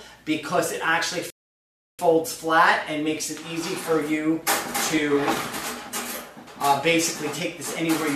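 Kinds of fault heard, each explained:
Rebuffering stall: the player exhausted its downloaded audio and paused until more data arrived, so the sound drops to silence from 1.30 to 1.99 s, adding about 0.69 s, then resumes exactly where it stopped. Unlike a dropout, nothing is skipped; the audio continues seamlessly after the gap.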